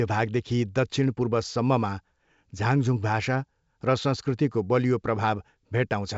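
The speech carries the sound of G.722 wideband telephone coding, with nothing above 7.7 kHz and a quiet, steady character that fits the full 64 kbit/s mode, and no fault can be heard anywhere in it.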